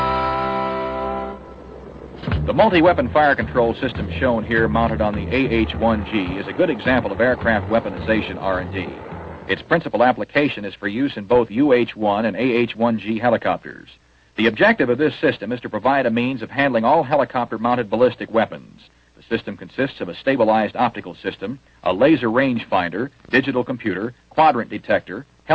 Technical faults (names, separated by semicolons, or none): clock drift between sender and receiver; repeated timing corrections